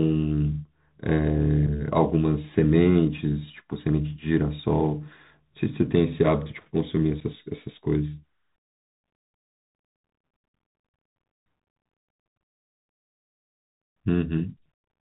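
Throughout the clip the speech is narrow and muffled, with nothing above 4 kHz, scratchy s sounds, and a grainy hiss under the voice. This is the Bluetooth CVSD headset codec, which fits a 64 kbps CVSD link tracking the waveform one bit at a time with an adapting step that can't keep up with sharp, high sounds.

Between 1.67 and 1.69 s, and again at 7.2 s, the speech drops out in a brief hole with hard edges, about 7.5 ms each. Both are unconcealed Bluetooth headset packet loss: a couple of voice packets went missing between headset and phone, and the gap was left unfilled.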